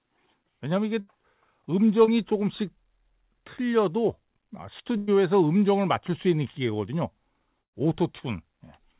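Speech, carried over a call path with nothing above 4 kHz, which fits narrowband G.711 telephone coding. A burst of packet loss hits three times: 1.00 to 1.09 s, 4.97 to 5.09 s and 7.61 to 7.75 s. Each time the receiver stretches the last sound, then jumps ahead. About 80, 100 and 120 ms of speech are lost. The last gap fades mostly to silence for about 110 ms. One short concealed packet loss occurs at 2.05 to 2.09 s. About 20 ms never arrived. The gap was filled by continuing the previous sound, leaving a brief smear before the real audio blends back in.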